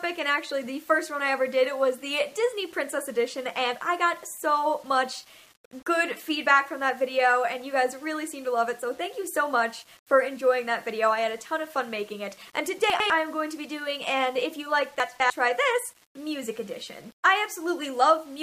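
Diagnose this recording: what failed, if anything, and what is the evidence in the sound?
Low bit depth without dither, likely from sample-format conversion. Grainy distortion tracks the sound throughout, roughly 30 dB down, which fits rounding to 8 bits.

Chunks out of order, at the buffer or storage stage. At 12.9 to 13.1 s and 15.0 to 15.3 s, 100 ms blocks play late, causing jumbled moments.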